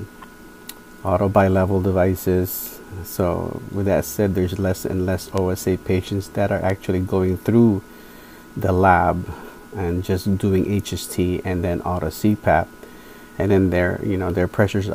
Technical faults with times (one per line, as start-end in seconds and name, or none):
4.05-6.46 video or display buzz